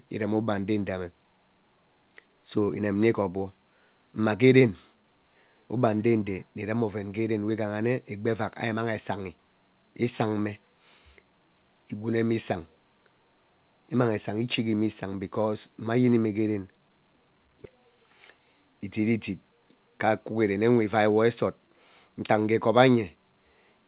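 Speech over a call path whose band stops at 4 kHz, consistent with a narrowband telephone codec such as G.711 A-law, with no faults found.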